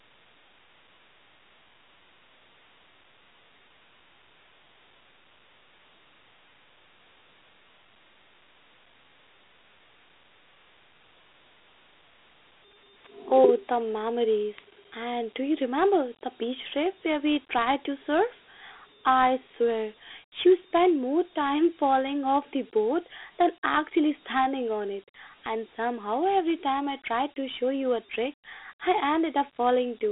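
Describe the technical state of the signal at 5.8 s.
A gritty hiss clings to the speech at 5.8 s, with thin telephone-band tone and nothing above 3.8 kHz; throughout, Dialogic VOX ADPCM's coarse 4-bit coding at 32 kbps, fitting 8,000 samples a second, causes this.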